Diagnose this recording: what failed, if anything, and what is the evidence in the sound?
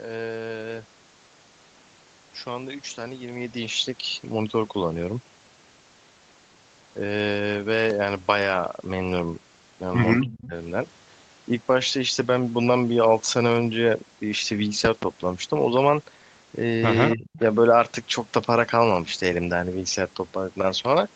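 The loud pops are the first thing I'd flag. There's a single sharp pop at 7.90 to 7.93 s, peaking about 10 dB above the speech, then a quick double pop between 14.85 and 15.05 s, about 15 dB up. The speech carries straight on underneath both, which points to an impulse added on top rather than a dropout. The stage is most likely analogue wiring or a driver glitch, something like a connector, switch or static discharge putting a voltage step into the chain.

Next is an echo leak, showing up as a faint delayed copy of the talker coming back 258 ms late. It appears at 10.21 to 10.47 s and again at 17.10 to 17.16 s, both about 15 dB under the speech, plus a quieter scrap at 17.33 to 17.39 s, about 25 dB down. That steady 258 ms offset is the giveaway. The far end is playing the call on a loudspeaker, and its echo canceller is likely letting some of its microphone pickup slip back into the call, so this sits in call processing.

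The third fault is speech suppressed in double talk, also call processing, and it's tied to those echo moments. From 10.24 to 10.54 s the voice dips hard for roughly 300 ms, dropping as much as about 30 dB. At 17.15 to 17.40 s it dips again for roughly 150 ms, by about 20 dB. Both sides were active at once, and the echo canceller likely couldn't tell the talker from the returning echo, so it clamped down on both.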